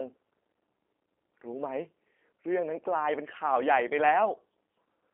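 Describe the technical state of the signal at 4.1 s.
At 4.1 s the speech is still under the G.729 codec damage that runs through the whole clip. The codec resynthesises each 10 ms frame from a vocal-tract filter, a pitch predictor and a few coded pulses. The result is plainly audible roughness and a slightly synthetic buzz, consistent with an 8 kbit/s coder. The telephone line band limits content to 250 Hz to 3.4 kHz, with nothing above 3.7 kHz, so the sound is thin and muffled.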